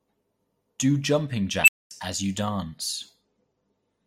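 At 1.64 s an unstable filter, fed bad coefficients, swells a squeal near 3 kHz to clipping within 38 ms, then overflows into 230 ms of silence before "as you". A spectrogram shows a bright line then a blank gap; the waveform balloons until it clips, then flatlines.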